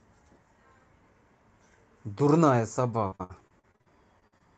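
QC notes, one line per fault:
3.07 to 4.42 s, repeated packet loss (robotic sound): eleven dropouts in quick succession, the longest about 60 ms, with roughly 30% of that stretch covered by concealment stretching the last bit of sound, so it goes choppy and robotic, with chunks missing.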